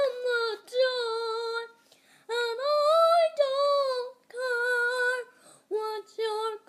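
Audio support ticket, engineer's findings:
No fault found on listening. No dropouts, clicks, distortion or timing problems were detected anywhere in the clip.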